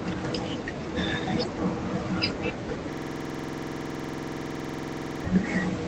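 From 2.93 s to 5.24 s the speech locks into a system hang loop: a 46 ms slice repeats identically, about fifty times, at 21.5 Hz, fitting a 2048-sample buffer. Unlike dropouts or packet-loss stutter, there are no gaps and no variation, just a rigid, buzzy machine-gun rattle.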